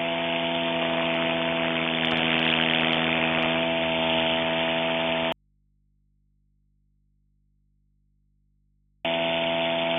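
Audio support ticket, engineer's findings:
Audio dropout to a faint residue, 5.32 s to 9.05 s. Sound cuts out hard, not a fade, for about 3.7 s. Gap holds only mains hum, roughly 40 dB below the programme level. Likely an intermittent cable or connector dropping the feed upstream. The downstream gain stage stays live, so its open input picks up hum until the signal snaps back at 9.05 s.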